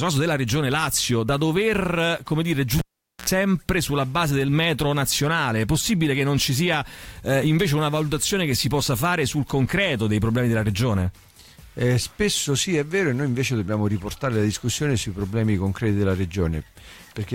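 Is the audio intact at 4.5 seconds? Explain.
Yes, the audio at 4.5 seconds is intact, with no dropout, click, distortion or other fault at that moment.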